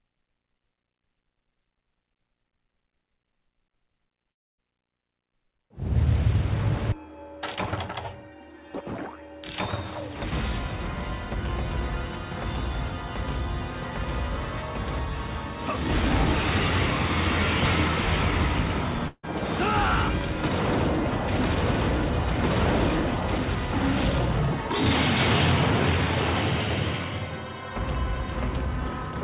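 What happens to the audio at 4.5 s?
From 4.32 to 4.60 s the sound stretches into a fading buzz or hiss, then falls to silence for about a quarter second before resuming with a piece missing. The likely cause is a long network dropout, with the receiver filling the gap.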